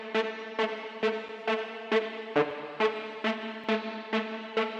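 Two short blocks of digital silence land in the sound, one at 2.51 s and one at 3.64 s. Each drops out for about 2.7 ms, which fits a 128-sample buffer that wasn't filled in time. The signal jumps straight to zero and straight back with no fade. At that length you hear a quick tick or pop rather than a hole.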